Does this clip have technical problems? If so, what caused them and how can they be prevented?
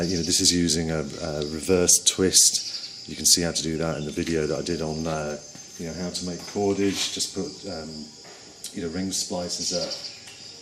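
Yes. Throughout the audio there is a dull, gurgling, granular quality with upper frequencies flickering in and out, plainly audible and likely MP2 compression. MPEG Layer II divides the signal into 32 equal sub-bands and shares bits among them. At a rate that sounds like about 80 kbps, the upper bands keep dropping out and the remaining ones are coarsely quantised. Unlike MP3 swirl, the damage is band-wise switching and grainy roughness. Encoding at a higher bitrate, or with a more efficient codec, prevents it.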